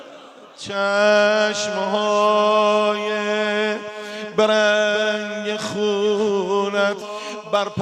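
The audio has two bits of hard clipping. From 2.22 to 2.77 s the peaks push about 1 dB past what the chain can carry, so the tops get sliced flat. At that mild level you get a crackle riding the loud moments rather than full-on fuzz, with added upper harmonics high up the spectrum. There's a second, much shorter instance at 7.55 s, pushed harder at about 2 dB, which comes across as a brief sharp crunch. Just before that, at 7.01 to 7.04 s, the sound suddenly jumps forward with a small blip, as if a chunk of the programme went missing and playback carried on from a later point. That's the signature of a stream segment skipped, most likely a piece of a segmented stream that failed to load so the player moved on to the next one. Then at 7.29 s there's a single sharp click, a thin vertical line in the spectrum, where the waveform leaps from one value to a later one. That points to dropped samples, likely a tiny fraction of a millisecond lost from the stream. 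That's far too short to take out any audible content, but it's plenty to put a hard discontinuity in the waveform.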